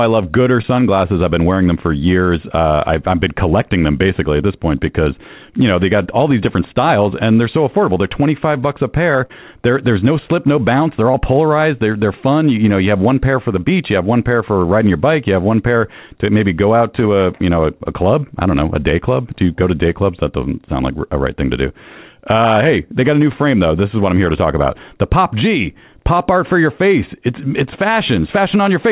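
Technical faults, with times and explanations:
0.62–0.66 s, 9.26–9.31 s and 11.11–11.16 s: short concealed packet loss. Gaps of 20, 40 and 20 ms never reached the decoder in time. The receiver continued the preceding sound, then blended back into real audio. Each spot sounds like a brief smear or wobble.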